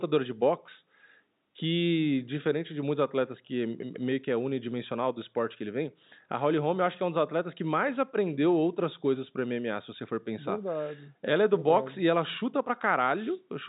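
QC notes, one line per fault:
No faults are heard in this speech clip. The sound carries the narrow band of G.711 telephone coding, with nothing above 3.8 kHz, as expected from a standard mu-law phone channel.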